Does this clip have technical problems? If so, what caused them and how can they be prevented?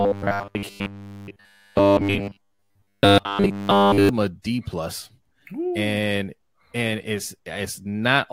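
Yes. From 0.01 to 4.09 s the speech has robotic sound from repeated short buffers: a rigid, metallic 100 Hz buzz, likely caused by essentially every stretch being filled with a repeated segment of about 10 ms while new audio arrived too late. A larger playback buffer or more reliable delivery would prevent it.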